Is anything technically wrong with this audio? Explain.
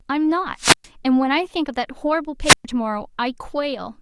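Yes, there are two wireless microphone squelch dropouts, at 0.57–0.88 s and 2.42–2.65 s. Each time the radio link fades, hiss swells briefly, then the receiver's squelch mutes the output for about 120 ms before the speech returns.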